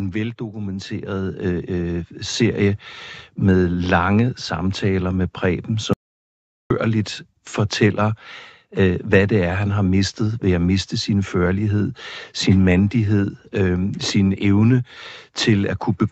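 Speech carried over a call path, with nothing above 8 kHz, showing two faults. From 0.37 to 2.75 s there is an automatic gain rise: the gain control judges the input too quiet and lifts it by about 9 dB, so voice and background noise swell together, seen as a waveform envelope widening steadily. At 5.93 s comes an audio dropout to silence lasting 0.77 s, until 6.70 s. The sound cuts off mid-flow and returns abruptly, leaving a flat line on the waveform and a blank vertical band on the spectrogram with no room tone, likely from the input link being lost briefly.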